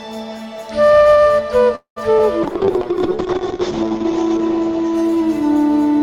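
From 1.75 to 1.98 s there is a call audio freeze, likely from packets held up in transit so the jitter buffer ran dry. The music stalls into a fading continuation of its last sound, with about 0.11 s of silence, then resumes where it stopped, now running about 0.21 s later.

At 2.18 to 2.21 s comes a short concealed packet loss: about 20 ms of audio never reached the decoder in time, and only a few milliseconds were patched by extending the preceding sound. The music briefly smears or wobbles before blending back.

From 2.44 s to the end, a call bitrate drop takes the encoder from 64 kbps down to 7 kbps, its lowest level holding for about 1.2 s. The audio band shrinks from 20 kHz to 8 kHz, so the music turns muffled, rough and watery.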